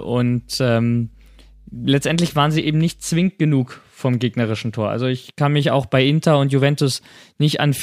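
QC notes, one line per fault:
0.0 to 3.28 s, mains hum: a steady low tone at 50 Hz sits under the speech, roughly 30 dB below it. Power-line current is leaking into the signal through a ground loop or a nearby transformer. The hum then stops.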